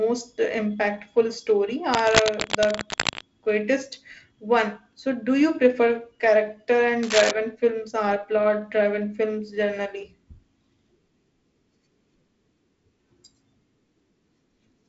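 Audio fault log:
1.92–3.21 s and 7.03–7.31 s: cable scratch noise. Uneven crackling rasps over the speech after "impactful story", then quieter before "films or plot driven". Likely a loose connector.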